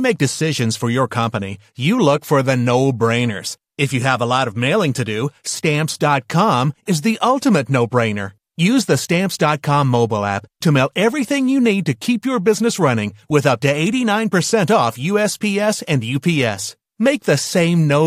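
Nothing in this bit of speech trips any alarm, so there's simply no technical fault here to walk through.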